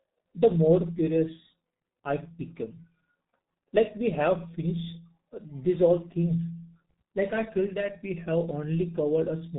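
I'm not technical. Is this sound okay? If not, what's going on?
No. The speech runs through a G.723.1 codec from start to finish, an old low-rate phone-call format. It keeps nothing above about 3.8 kHz and processes sound in coarse slices, so the voice comes across muffled and hoarse, with smeared consonants.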